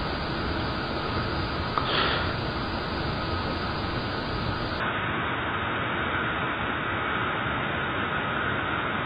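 From 4.80 s to the end, the audio turns dull and boxy, with nothing above 3.8 kHz, a new background noise roughly 35 dB below the signal, and no gap or obvious level jump at the change. That points to the input likely having switched to a poorer device.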